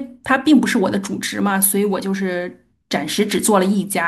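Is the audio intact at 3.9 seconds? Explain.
Yes, the audio at 3.9 seconds is intact, with no fault present at that moment.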